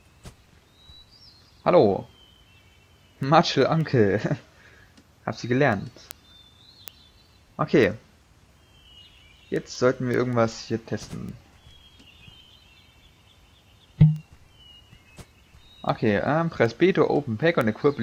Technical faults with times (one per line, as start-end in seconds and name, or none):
0.17-18.00 word clock ticks